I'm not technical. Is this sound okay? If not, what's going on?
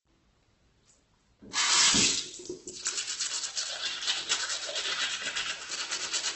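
No. From start to finish the sound is grainy and rough, and everything above about 8.2 kHz is missing, so it lacks sparkle and air. This is likely heavy Opus compression. To save space, the encoder rebuilds parts of the sound from copied or noise-like filler instead of the real detail, which is why steady tones come out gritty. Unlike MP3 damage, there's little watery, swirling warble, just a constant coarse, dulled texture.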